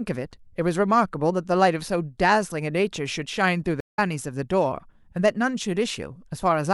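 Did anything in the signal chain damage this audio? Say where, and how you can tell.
Yes. A stream reconnect at the network stage: the connection dropped and playback restarted with a fresh decoder. The speech cuts to about 172 ms of silence from 3.80 to 3.99 s, then resumes roughly a fifth of a second further on, so that stretch of speech is skipped.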